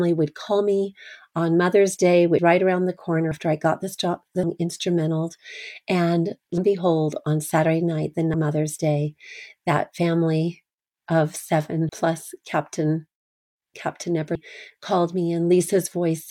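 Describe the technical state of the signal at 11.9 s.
At 11.89 s the speech hits compressed frames skipped: about four whole frames never reach the output, so roughly 150 ms of audio is simply missing and the speech lurches forward, which fits a codec using 32 ms frames. On a waveform the envelope changes abruptly; a spectrogram shows harmonics and formants jumping discontinuously.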